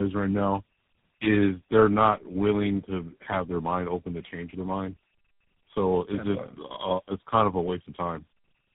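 Throughout, tandem speech coding: three speech codecs in a row recoded the already degraded speech, leaving rough, noisy, muffled, warbly speech and a spectrogram ceiling near 3.8 kHz.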